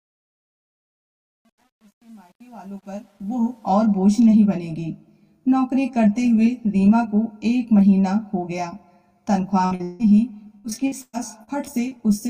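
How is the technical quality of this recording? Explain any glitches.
The recording has two problem areas: a grainy opening and a run of network glitches in the last few seconds.

From 0.0 to 3.71 s the fade-in sounds gritty, worst until about 2.89 s. This is truncation distortion on a fade: the gain stage kept roughly 9 bits without dither, so quiet passages collapse into coarse square steps.

At 9.65 to 9.73 s the sound briefly turns into a held, fading tail, and the audio resumes about 60 ms further on. This burst of packet loss was patched by extending the last sound while turning it down, so that stretch is gone.

At 9.75 to 9.81 s there is a quick smear or wobble. A short concealed packet loss of about 40 ms was filled by continuing the previous sound, then blended back, so a brief sound may have vanished there.

From 9.83 to 10.01 s a longer buzz or hiss decays without reaching silence, and about 160 ms of material is skipped. 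This is most likely a long network dropout, where nothing arrived and the receiver stretched the last sound across the hole.

From 10.57 to 12.01 s the audio turns choppy. Repeated packet loss created eight gaps, the longest about 116 ms, and concealment filled roughly a quarter of that stretch, leaving pieces missing.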